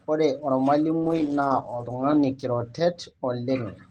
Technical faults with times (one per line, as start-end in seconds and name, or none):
1.02-3.63 call bitrate drop